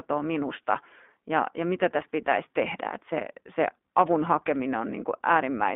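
From start to finish the speech has passed through the iLBC codec, a narrowband VoIP coder that rebuilds each 20 ms frame's excitation independently of the frame before, at a rate that fits its 15.2 kbps mode. The line passes only about 200 Hz to 3.5 kHz, so the voice sounds thin and boxed in, and the coding damage is plainly audible as a rough, slightly synthetic texture.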